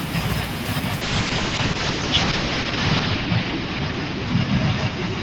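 From 1.03 s to the end, a call bitrate drop turns the speech rough and muffled, which fits the encoder falling from 32 kbps to 7 kbps. On a spectrogram the bandwidth collapses from 20 kHz to a hard 8 kHz ceiling, with smeared, blocky texture below.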